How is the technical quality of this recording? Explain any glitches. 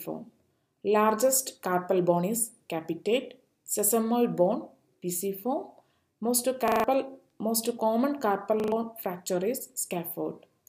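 Two stutters mark the recording, at 6.68 to 6.84 s and 8.6 to 8.72 s, both repeated buffers: fresh audio failed to arrive, so the device replayed its last chunk. A short fragment, fitting a 40 ms buffer, plays four extra times at the first spot and three at the second, with hard joins between copies, and roughly 150 ms and 100 ms of audio go missing. Unlike a dropout, there is no silence, only identical copies looping.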